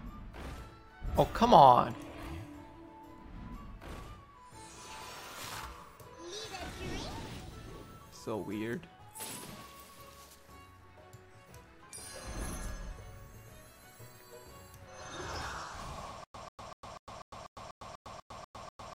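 From 16.24 s to the end, a stutter with silent gaps: a 141 ms burst repeats about every 245 ms with 104 ms of digital silence between, likely a stalled stream.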